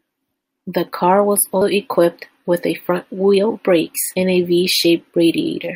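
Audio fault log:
1.61 s and 4.15 s, compressed frames skipped. The speech jumps ahead each time, by roughly 150 ms and then roughly 100 ms. Whole 24 ms frames were lost or rejected by the decoder.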